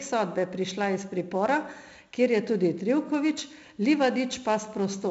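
Speech, carrying 4-bit ADPCM compression from start to finish. Each sample is coded as a small step from a predicted value. The step size adapts as the signal changes. The error left behind is a gritty hiss that rises and falls with the level, heavy here on every loud syllable. Sharp onsets sound rough where the step lags behind. Nothing reaches above about 7.7 kHz, so the top is dull. That fits 64 kbps at a 16 kHz sample rate.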